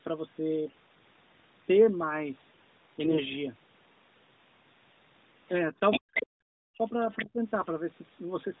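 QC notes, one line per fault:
3.04–3.20 s and 7.62–7.69 s, AMR bit errors: in both spots the speech turns suddenly hoarse, scratchy and gargly while keeping roughly its pitch and loudness. This fits flipped bits in the weakly protected part of the AMR frames. The excitation pulses land in the wrong places and the fine gain, pitch and spectral values come out wrong. The first burst lasts about 0.17 s and the second about 0.07 s, which suggests a handful of 20 ms frames each time. The grit is coarser in the second burst.
5.48–5.52 s, 5.91–6.26 s and 7.11–7.26 s, other side's voice leaking through: a second voice comes through in scraps. At 5.48 s it is a very faint flicker, far below the main talker. From 5.91 to 6.26 s it is about as loud as the main talker. At 7.11 s it is only slightly below the main talker. The likely cause is the far end's loudspeaker audio reaching the microphone and getting past the echo canceller, so the remote talker is heard inside this side's audio.
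5.60–5.81 s, 6.00–6.84 s and 7.17–7.39 s, speech suppressed in double talk: the main talker's level sags in places. At 5.6 s it is a slight dip over a short stretch. From 6.0 to 6.84 s the speech drops almost to silence in pieces. At 7.17 s there is another deep, brief cut. The likely cause is an echo canceller that cannot separate its own talker from the loudspeaker echo while both are active, and so attenuates everything. Throughout, the band stops at 4 kHz, as expected from the narrowband mobile codec.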